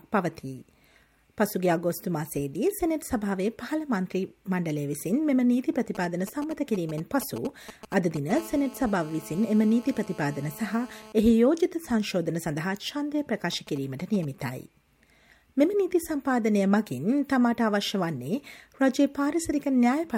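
From 5.95 to 8.32 s, GSM signalling bursts from a nearby 2G phone break in as a galloping dit-dit-dit of short 217 Hz buzzes, roughly 15 dB below the programme. The audio circuitry rectifies the intermittent radio bursts, which fits a handset exchanging control traffic rather than carrying a call.

At 8.35 s this turns into a continuous GSM phone buzz lasting until 11.12 s. The phone is now transmitting steadily 217 times a second, and the rectified pulses produce a hard, raspy 217 Hz tone with many harmonics, about 20 dB below the signal. From 13.52 to 14.25 s the signalling bursts return, around 20 dB down.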